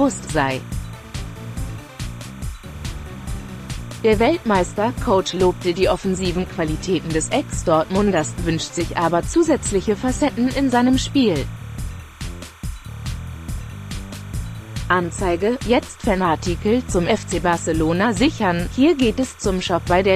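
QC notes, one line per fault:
Throughout, timecode bleed: a steady chirpy warble sits under everything, 30 fps linear timecode leaking in and flipping between about 1 and 2 kHz.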